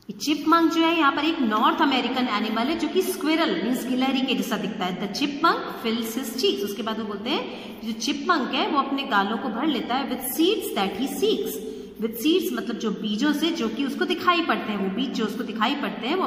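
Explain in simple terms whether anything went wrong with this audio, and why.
Nothing went wrong with this recording, and no technical fault turns up anywhere in it. There is no dropout, glitch or distortion to point to at any moment.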